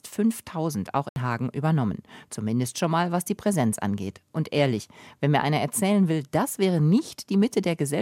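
At 1.09 s the audio drops into a block of digital silence lasting about 70 ms, to 1.16 s. Samples were replaced by zeros with no fade in or out, so the sound cuts out and back abruptly, with a short hole between.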